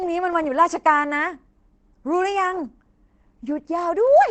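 A speech clip with Opus compression throughout: muffled, hoarse and plainly damaged, likely low-rate Opus in its speech mode, and the spectrogram shows nothing above about 8.9 kHz.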